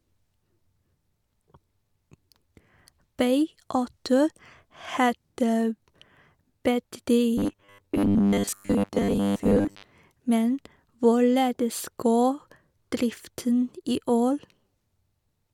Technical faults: robotic sound from repeated short buffers

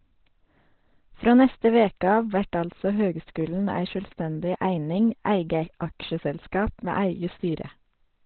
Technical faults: Opus compression

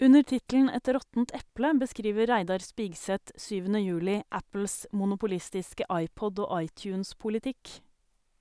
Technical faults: none

